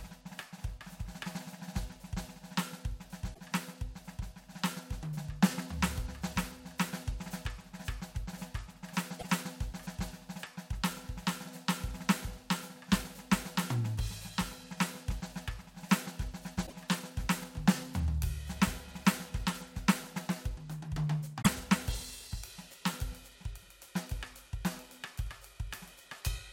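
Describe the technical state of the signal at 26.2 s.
At 26.17 s the music carries damaged data in the compressed stream: corrupted frame bytes make the decoder lose sync and resynchronise, producing a brief digital blip.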